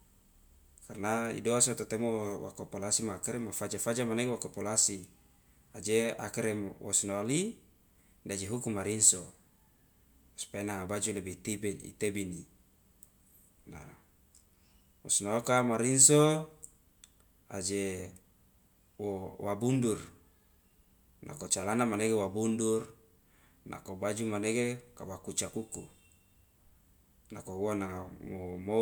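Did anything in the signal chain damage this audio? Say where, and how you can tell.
No, nothing in the signal chain damaged this audio.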